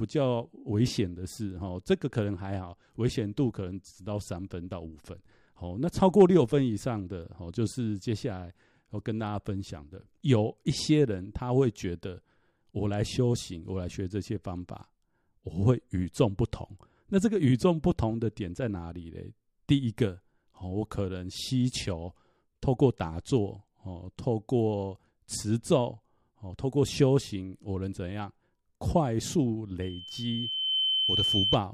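From 29.82 to 31.58 s, loudspeaker feedback squeal: a 3.1 kHz tone swells over about a second until it sits a few dB above the speech.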